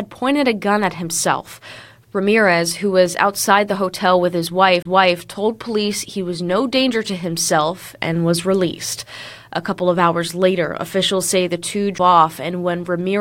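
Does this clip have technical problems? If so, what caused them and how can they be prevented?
Yes. Two CD skips occur, at 4.82–4.85 s after "the hotel with his" and at 11.98 s after "officials say the two." In each, the laser lost its track, briefly muted, and resumed elsewhere on the spiral. Prevent this by ripping from a clean, undamaged disc with a secure, error-checking ripper on a vibration-free drive.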